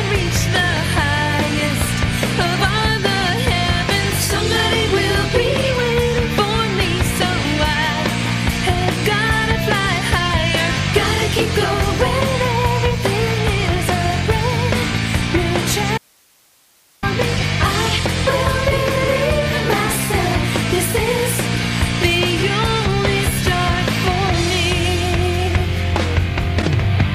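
At 15.98 s the sound cuts off abruptly and, for about 1.05 s until 17.03 s, leaves only faint hiss roughly 35 dB below the signal: an audio dropout to a faint residue, likely the wanted signal lost while the path stayed live. Short bursts of misplaced energy at 17.34 to 17.42 s and 26.61 to 26.68 s are corrupt frames decoded, with flipped bits across a few compressed frames played as though valid.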